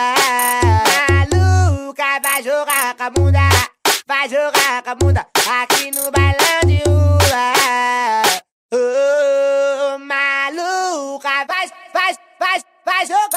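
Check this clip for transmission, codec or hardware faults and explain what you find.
Nothing in the signal points to a transmission, codec or hardware problem anywhere in the clip.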